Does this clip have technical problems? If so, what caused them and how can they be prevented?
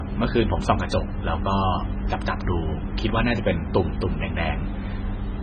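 Yes. Throughout the speech there is heavy damage that sounds like MP3 compression, likely from encoding at a very low bitrate, around 16 kbps. Nothing is present above 8.8 kHz, so sibilants lose their edge, and the remaining sound is watery and swirly, with smeared onsets. On a spectrogram this shows as a hard flat ceiling at 8.8 kHz and blotchy, patchy energy below it where weak components flicker on and off frame by frame. To prevent it, encode at a much higher bitrate or keep a lossless copy.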